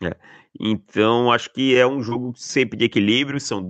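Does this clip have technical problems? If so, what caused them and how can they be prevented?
Yes, there are two. From 2.09 to 2.13 s there's a short concealed packet loss. About 20 ms of the speech didn't reach the decoder in time, and the receiver covered roughly 17 ms by extending the last sound before blending back into the real audio. It comes out as a quick smear in the Opus call path, whose top end stops around 8 kHz. A deeper jitter buffer or forward error correction would prevent it.

From 2.34 to 2.50 s there's a sudden gain jump. The speech and the background noise both drop by about 6 dB in one step, with no fade at all. The likely cause is a gain setting being applied instantly, without a ramp. Smoothing any gain change over a few milliseconds would prevent it.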